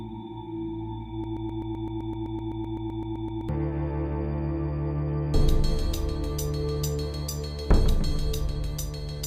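From 1.24 s to 3.49 s the audio falls into a broken-record loop. One fragment about 128 ms long repeats 18 times back to back, roughly eight times a second, and whatever should have played in those two and a quarter seconds never arrives. The repeats are identical and do not fade, which sets this apart from an echo or reverb tail. The likely cause is a stalled player, encoder or stream re-sending its last buffered piece.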